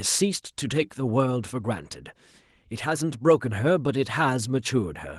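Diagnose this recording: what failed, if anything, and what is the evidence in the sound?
Nothing failed: the speech carries only the light texture of Opus voice compression, with full bandwidth retained in a way that fits hybrid coding at around 24 kbps, and no stage from wiring through playback shows a defect.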